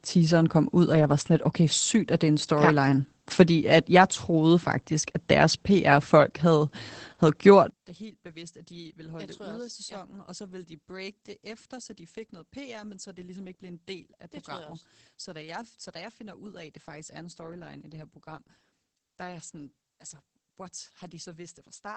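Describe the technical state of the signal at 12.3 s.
At 12.3 s you're in the stretch where one channel is inverted, from 7.7 s (just after "havde havde gjort") to the end. The polarity flip likely cancels the centred speech in mono, dropping it about 21 dB. Under that sits Opus voice compression throughout. At roughly 12 kbps in SILK wideband mode, nothing survives above about 8.7 kHz, so the speech sounds muffled and a bit hoarse.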